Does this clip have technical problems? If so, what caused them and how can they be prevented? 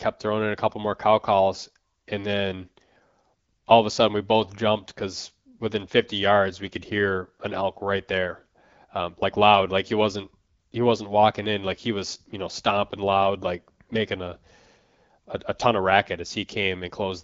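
No, nothing stood out as a technical problem on listening, so there is nothing here that needs preventing.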